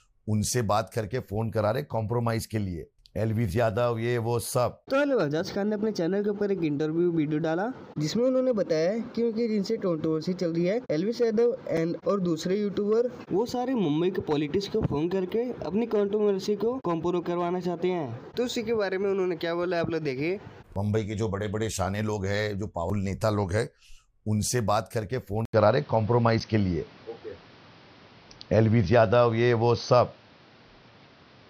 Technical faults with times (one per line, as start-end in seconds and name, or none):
11.77 block of digital silence
15.30 block of digital silence
25.45-31.49 input switched to a poorer device
26.40 block of digital silence